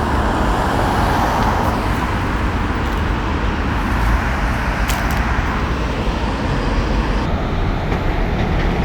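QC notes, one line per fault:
7.26–8.84 s, section at the wrong speed: the sound drops about five semitones and slows to 0.745x, likely played back against the wrong clock.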